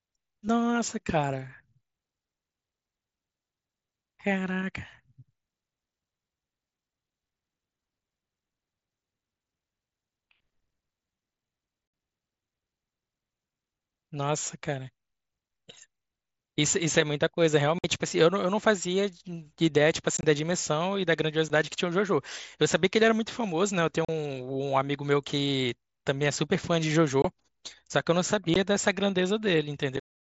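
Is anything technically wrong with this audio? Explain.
Yes: the speech has unconcealed Bluetooth headset packet loss. Holes open at 11.88 s (60 ms), 17.79 s (about 55 ms), 20.17 s (scattered over 60 ms, longest gap about 22 ms), 21.48 s, 24.05 s (about 40 ms), 27.22 s (about 25 ms), 28.54 s and 29.97 s (scattered over 75 ms). Short voice packets between headset and phone went missing, and nothing filled them. Their lengths fit 7.5 ms mSBC frames. Each dropout has hard edges and briefly chops the voice, including inside the smooth fade-out near 30 s, across the wideband mSBC sound that reaches 8 kHz.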